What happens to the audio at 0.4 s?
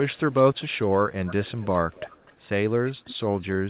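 At 0.4 s you're in the middle of an echo leak that runs from about 0.03 to 0.97 s. A faint, delayed copy of the speech trails the original by roughly a quarter of a second (about 247 ms), sitting well below the main level. It's most likely a far end on a loudspeaker whose echo canceller didn't fully scrub what its mic picked up, so that residue got sent back down the line.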